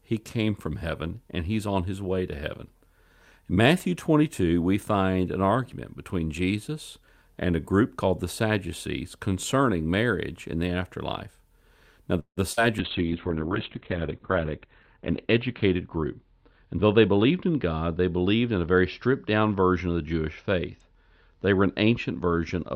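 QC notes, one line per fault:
12.19–12.39 s, call audio freeze: the sound stretches into a fading buzz, then goes quiet for 90 ms. Likely late packets emptied the jitter buffer, inserting 174 ms.
12.53–12.59 s, short concealed packet loss: 40 ms never arrived. The receiver bridged it by extending the preceding sound, leaving a brief smear.
12.79–22.75 s, call bitrate drop: coding falls from 48 to 6 kbps. Bandwidth shrinks from 20 kHz to 4 kHz, so speech turns muffled and rough.
14.65–17.32 s, jitter buffer speed-up: speech runs at 107% speed, same pitch. Repeated trimming of pitch periods removes about a fifth of a second, sounding hurried.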